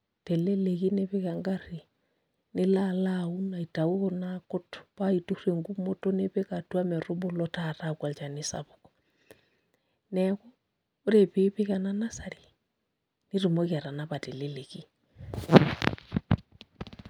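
No technical faults are audible.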